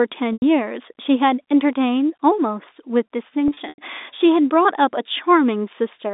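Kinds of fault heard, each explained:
Packet loss with pitch repetition: lost stretches are filled by looping the last pitch period, heard as brief buzzy holds at 0.33 s and across 3.48–3.78 s. A spectrogram shows frozen, evenly spaced harmonic stripes, and the waveform repeats the same cycle as it fades out.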